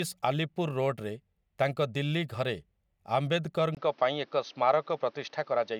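Input switched to a poorer device at 3.75 s in this speech clip: after a 20 ms gap, the sound turns duller, with nothing above 6.4 kHz and new background noise. This is likely a change to a narrower-band microphone.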